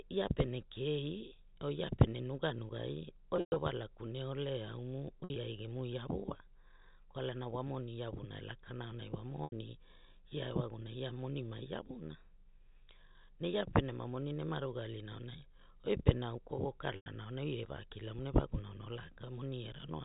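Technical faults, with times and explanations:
3.36–3.56 s, 5.20–5.36 s, 9.44–9.52 s and 16.96–17.06 s: packet loss with pitch repetition, after "or ia pene nuganugai", after "gune ole aumu" and after "lakana aunai wa". The decoder repeats the last pitch cycle to fill each gap, so short holes sound like a held, buzzy tone. The 120 ms run at 3.36 s fades towards silence. A spectrogram shows frozen, evenly spaced harmonic stripes, and the waveform shows one copied period repeating as it decays. The gaps fit 20 ms packets. The band stops at 4 kHz, as telephone coding does.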